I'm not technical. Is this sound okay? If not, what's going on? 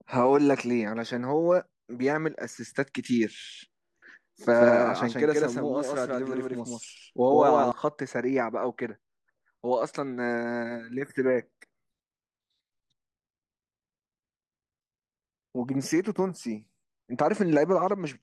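No. From 4.54 to 7.72 s there is a doubled audio track: the speech repeats about 150 ms behind itself at equal loudness, likely from a second, slower recording path.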